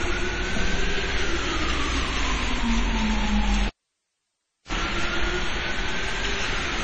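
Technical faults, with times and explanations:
Throughout, transcoding between lossy codecs: nothing reaches above about 8.7 kHz, and the smeared, swirly artefacts of one low-bitrate codec sit on top of another's. That layering likely comes from MP3 at 32 kbit/s being re-encoded to AAC-LC at 32 kbit/s, each pass keeping the lowest cut-off.
3.67–4.73 s, cable pulled and plugged in: a pop at 3.67 s, then about a second of near silence while the lead is out, then a brief 36 ms burst of 60 Hz mains buzz as the tip touches first, and a second pop when the sound comes back.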